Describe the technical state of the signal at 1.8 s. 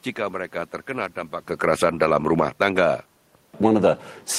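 At 1.8 s the signal is inside an automatic gain falling span, running from 1.49 to 2.79 s, just after "jika mereka terkena". Having judged the input too loud or its background noise too strong, the gain control eases its gain down by about 6 dB across that stretch, so the speech sinks gradually. What separates this from a talker moving back from the microphone, which also happens near 1.5 s, is that the room noise drops along with the voice.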